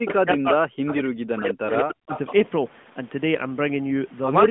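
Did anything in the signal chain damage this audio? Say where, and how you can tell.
Yes. Speech suppressed in double talk, in the call processing, from 0.0 to 0.6 s and 0.97 to 2.12 s, with dips of about 40 dB. The echo canceller likely ducked the talker while the far side spoke. Unlike packet loss, the level is turned down rather than cut to gaps with clicks.

Echo leak, also in the call processing, at 0.08 to 0.14 s and 1.69 to 2.34 s: a delayed copy arrives 196 ms late, about 15 dB and then about 10 dB below the speech. This is likely far-end loudspeaker sound that the canceller failed to remove. Room reverb would be a smooth tail, but this is a distinct repeat at a fixed lag.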